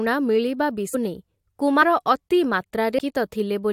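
Compressed frames are skipped at 0.93 s, 1.81 s and 2.97 s. At each point, whole 23.2 ms frames never reach the output, so the speech jumps ahead by roughly 400 ms, 100 ms and 400 ms respectively.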